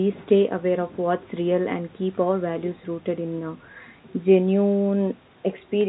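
No faults are audible in this speech: the G.711 telephone coding limits it to the narrow band below 4 kHz with only a faint quantisation hiss that rises and falls with the level, and the call microphone processing trims the lowest bass as it should.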